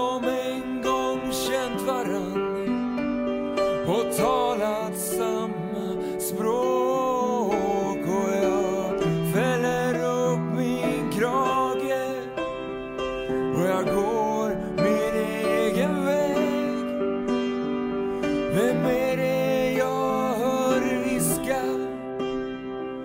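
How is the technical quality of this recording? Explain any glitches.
The technical quality of this recording holds up well, with no glitches to explain.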